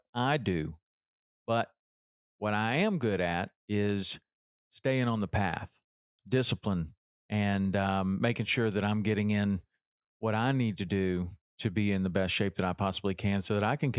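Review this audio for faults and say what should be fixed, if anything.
Nothing here needs fixing; I listened through the speech and didn't hear any technical faults worth addressing.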